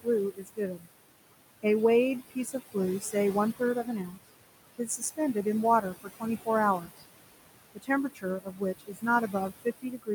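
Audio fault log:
Throughout, noise suppressor artifacts: the suppressor pulls down whatever frequency bands it judges to be steady noise, by about 20 dB, and the amount changes frame by frame. The room noise, sitting about 11 dB below the speech, therefore drops away in the gaps and comes back up under each phrase.
0.03–0.89 s, 2.30–3.14 s, 3.59–4.29 s, 4.78–5.46 s, 5.82–6.48 s, 6.80–7.03 s and 7.75 s to the end, speech cut by the noise suppressor: in each span the suppressor mistakes low-level parts of the speech for background and attenuates them, by about 16 to 21 dB at the deepest point. Soft consonants and word endings lose their energy along with the noise, so they sound swallowed or faint. The first span has a few tenths of a second of affected speech, and the final stretch has the deepest cut.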